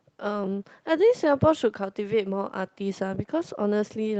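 Speech carried over a WebRTC call path with no technical faults, its high end stopping at about 8 kHz and its coding noise consistent with an Opus stream at around 32 kbps.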